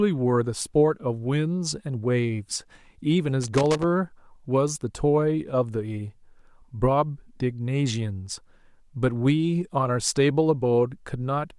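From 3.43 to 3.84 s, the speech is overrun by loose connector crackle: a worn or dirty contact keeps making and breaking, so the signal is chopped on and off for roughly 0.4 s. It sounds like an irregular, scratchy burst rather than a single clean tick. Digital dropouts and buffer glitches tend to repeat at a steady interval, but this crackle is ragged and uneven, the mark of physical contact movement.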